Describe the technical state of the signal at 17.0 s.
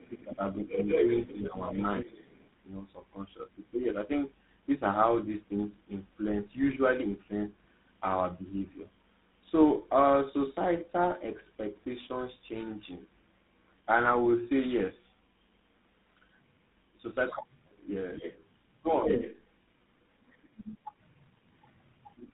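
At 17.0 s, as throughout, tandem speech coding is heard: the sound passes through two speech codecs in a row, likely ending in GSM full rate. Each one recodes the other's damage, so it is rougher and more warbly than a single codec, with nothing above 3.9 kHz.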